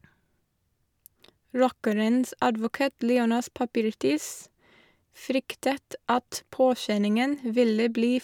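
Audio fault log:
Nothing to log here: the speech comes across without any audible technical faults.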